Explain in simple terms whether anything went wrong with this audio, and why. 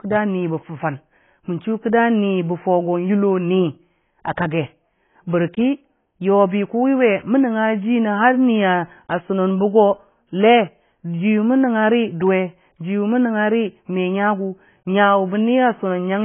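From start to finish the speech sounds dull and muffled, with nothing above about 3.7 kHz. This is likely low-bitrate audio saved at a high bitrate: a heavily squeezed copy was re-saved as a larger MP3, which cannot bring back the detail already lost.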